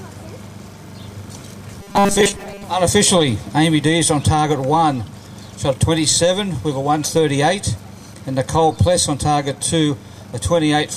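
From 1.81 to 2.64 s the audio collapses into a robotic sound from repeated short buffers: a rigid metallic buzz at 200 Hz, likely from a 5 ms slice being replayed through most of that stretch. Unlike mains hum, it follows the sound's rough shape and then stops.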